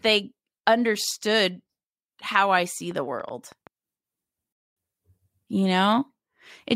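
A speech recording carries a train of clicks from 2.59 to 3.68 s: about seven sharp, similar pops at an uneven pace, averaging 4.6 per second and peaking at about the level of the speech itself. They tick over the talking and any gaps alike. The likely cause is electrical interference or a faulty connection or power supply. On a waveform they show as thin vertical spikes; on a spectrogram, as narrow full-height stripes spread irregularly across that second. At 4.53 s a rebuffering stall cuts the sound to silence for 238 ms, until 4.77 s. Playback then resumes at exactly the point where it stopped, so nothing is lost and time is added, consistent with the player running out of downloaded audio. The waveform drops to a flat line for that stretch, and the spectrogram shows an empty vertical band.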